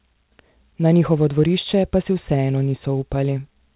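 There are no technical faults to describe in this speech clip, which comes over a call path whose G.711 A-law coding leaves nothing above 4 kHz.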